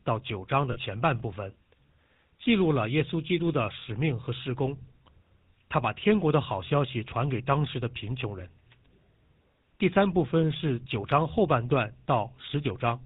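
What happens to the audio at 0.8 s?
Just before 0.8 s, from 0.72 to 0.77 s, there are lost GSM frames: about 40 ms of signal, which fits two dropped 20 ms frames. The decoder covered the gap by reusing the last good frame's filter and excitation settings, so the sound holds as a brief rough, metallic ring instead of a clean gap. On a spectrogram the band looks smeared and frozen, with a short flat stretch; the waveform shows a repetitive segment.

Around 0.8 s, as across the whole clip, the GSM full-rate codec at 13 kbps is plainly audible. It rebuilds speech from a vocal-tract model driven by regularly spaced pulses and keeps only every third excitation sample, which gives a buzzy, gravelly roughness. A spectrogram shows a hard ceiling at 4 kHz with nothing above it, and the harmonics below look coarse and grainy.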